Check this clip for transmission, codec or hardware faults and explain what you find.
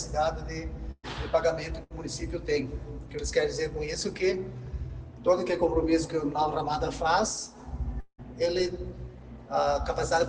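Two kinds of transmission fault can be heard. At 0.91 to 1.05 s and again at 1.83 to 1.92 s the sound smears into a brief fading hold, then jumps ahead. This is a burst of packet loss: the receiver extended the last audio for 119 ms (the final 30 ms silent) and then 70 ms, skipping about 100 ms and 60 ms of material.

From 8.00 to 8.20 s the sound stretches into a decaying tail lasting about 180 ms, falls silent for its last 50 ms, and resumes with roughly 180 ms gone. The likely cause is a long network dropout, with the receiver filling the gap until nothing remained to extend.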